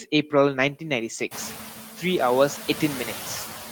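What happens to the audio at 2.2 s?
At about 2.17 s one lost packet is rebuilt from error correction. The decoder plays a low-bitrate copy for 20 ms, so there is no gap, only a briefly rougher, noisier patch. The noise suppressor artifacts, a roughly 6 dB cut of steady noise, continue through this moment as throughout the clip.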